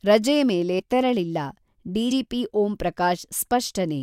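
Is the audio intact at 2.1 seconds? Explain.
No. At 2.10 s the speech suffers compressed frames skipped: around three compressed frames were never played, so the audio jumps ahead by roughly 70 ms, a jump that fits a 24 ms frame length. On a waveform the envelope shifts abruptly with no gap of silence, and a spectrogram shows a sudden discontinuity in the harmonic tracks.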